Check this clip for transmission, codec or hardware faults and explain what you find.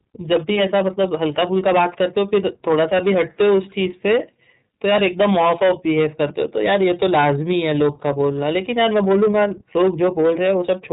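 Two faults run through the whole speech clip: hard clipping and iLBC codec coding.

Hard clipping persists from start to finish. The signal is driven about 13 dB past what the chain can pass, so around 7 percent of samples hit the ceiling and are cut flat. The waveform shows squared-off peaks, and the spectrogram shows vertical smears of harmonics on loud syllables, heard as a harsh fuzz.

The iLBC codec also spans the clip. It codes each 30 ms block independently, and the sound fits its 13.33 kbps mode. Nothing passes above 3.8 kHz, so the spectrogram is blank above that line. The codec damage is plainly audible: speech sounds muffled, rough and slightly synthetic.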